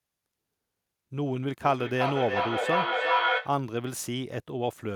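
A speech clip where, from 1.63 to 3.63 s, you get feedback echo between two devices: a second device in the room is replaying the call into the mic, so the sound comes back roughly every 0.4 s and builds up to about 3 dB over the speech instead of decaying.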